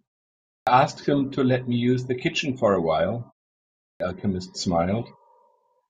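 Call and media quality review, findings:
Clipped start after a pause at 0.53 s and 3.87 s: onsets lost (138 ms, 133 ms) after 0.53 s and 0.63 s silences; output device sleeps in silence, slow to wake.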